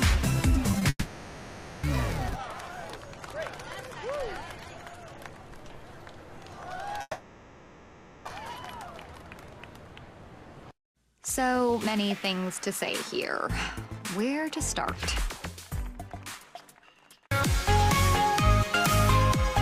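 Two brief smears come close together, from 0.71 to 0.75 s and from 0.79 to 0.83 s. Each is a short wobble where the audio seems to stretch and then blend back. This is short concealed packet loss: about 20 ms of the stream arrived too late to decode each time, and the receiver covered each gap by extending the preceding sound before crossfading into the real signal.

Just after, from 0.89 to 1.85 s, the sound is replaced by a continuation of its last moment that decays, followed by a brief silence of about 40 ms before the audio resumes. The same thing happens again from 7.01 to 8.27 s. These are likely long network dropouts. For 940 ms the first time and 1240 ms the second, nothing usable arrived, so the receiver filled the gap with synthetic continuation. That missing audio is lost rather than delayed.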